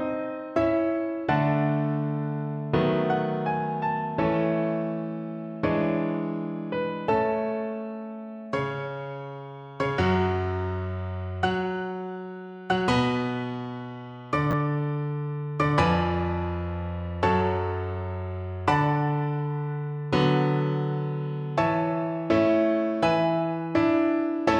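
Chunks out of order at 14.51 to 14.53 s: a 10 ms chunk of the audio turns up one chunk late, so it plays after the chunk that should have followed it. Nothing is missing, but the two pieces swap places within that 20 ms span, leaving three hard joins where the waveform jumps. The result is a brief jumbled moment in the sound, typical of a buffer being written or delivered out of sequence.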